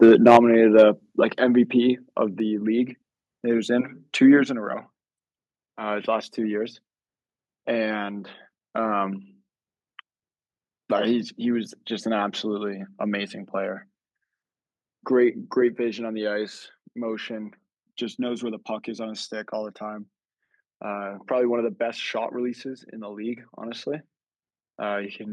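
An input level set likely too high drove this speech recording into microphone overload from 0.01 to 0.37 s and again from 0.78 to 0.83 s. Peaks went about 7 dB and about 2 dB past the converter's ceiling, and around one sample in twenty was flattened, giving those syllables a harsh, crackly edge. The call software then stepped the microphone volume down, probably in response, at 0.37, 1.38, 2.4, 4.44 and 15.69 s, by about 4, 5, 2, 5 and 3 dB. At each of those points the voice and background drop abruptly together.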